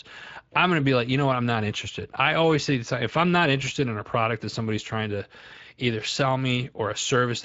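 Speex codec damage runs throughout: the speech has a plainly audible hoarse, noisy texture from coarsely coded excitation, consistent with a mode near 20 kbps.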